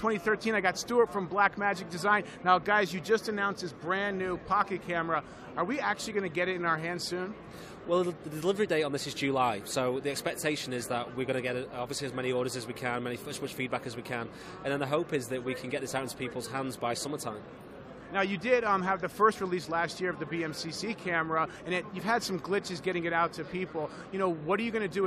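Nothing to flag anywhere in the recording.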